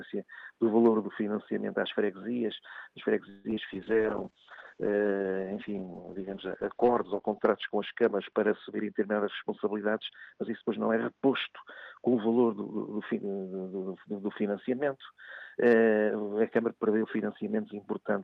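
At 3.29 s the sound stalls for about 0.17 s, to 3.47 s. The last moment is stretched into a fading buzz rather than dropping to silence, and then the audio carries on from where it stopped. This is a call audio freeze, likely caused by packets held up in transit so the jitter buffer ran dry. The receiver filled about 151 ms by extending what it had, so nothing was lost, but the stream now runs that much later than before.

Right after, two brief smears follow, at 3.51 to 3.53 s and 3.55 to 3.59 s, each a short wobble as the audio blurs and snaps back. These are short concealed packet loss. Each time about 20 ms of audio never reached the decoder in time, and the receiver patched the hole by continuing the previous sound before blending back into the real signal.

From 3.73 s the sound turns rough, watery and muffled, and it stays that way until 14.13 s. This is a call bitrate drop. The encoder was pushed from 64 kbps down to 8 kbps after the call's bandwidth estimate fell. 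At that rate the coding is far coarser, and the top of the spectrum is cut from 20 kHz to about 6 kHz, which removes the air and crispness. The lowest rate holds for about 3.48 s within that stretch.

Inside the degraded stretch, from 9.22 to 10.97 s, the audio also sounds hurried, running about 8% fast while its pitch stays put. This is a jitter buffer speed-up. Too much audio had piled up in the buffer, so the receiver trimmed out many short pitch-period slices in a row, around 150 ms in total, to bring the delay back down toward its target.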